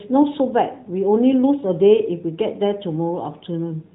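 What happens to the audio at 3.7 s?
Nothing goes wrong at 3.7 s: the speech carries straight through that moment with no dropout, click or distortion, heard through the same AMR narrowband mobile codec band limit of about 3.8 kHz as the rest of the clip.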